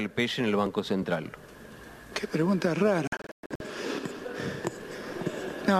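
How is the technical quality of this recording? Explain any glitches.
One glitch degrades the recording. From 3.07 to 3.61 s, a digital broadcast dropout mutes the audio in several short holes, about 336 ms lost in total, longest 120 ms, as failed frames were silenced.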